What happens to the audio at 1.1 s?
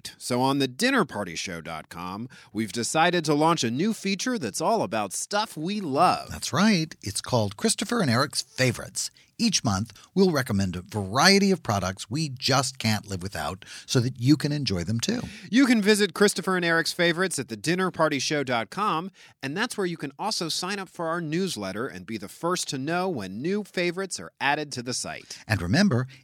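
Nothing goes wrong at 1.1 s: the speech plays through that moment intact, with no dropout, click, distortion or other fault.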